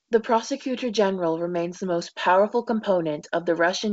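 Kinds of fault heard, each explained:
No kinds of fault are heard in this speech clip.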